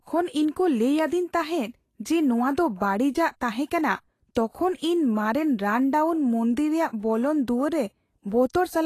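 From start to end, the speech carries damage that points to Vorbis compression as the likely cause. Nothing is heard above 14.2 kHz. The treble below that limit is coded so coarsely that fine detail turns into noise of similar energy. The speech comes out hissy and grainy. Consonant attacks sound smeared rather than crisp. The damage is plainly audible, which fits a low bitrate somewhere around 33 kbps.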